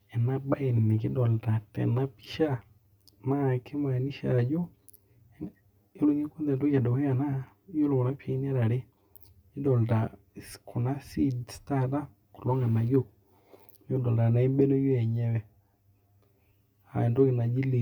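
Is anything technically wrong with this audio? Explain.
Yes. Throughout the speech there is channel delay (comb filtering): one channel runs around 10 ms behind the other, and summing them to mono cancels shared content at evenly spaced frequencies, starting near 50 Hz. The voice sounds hollow and phasey, with fixed spectral notches.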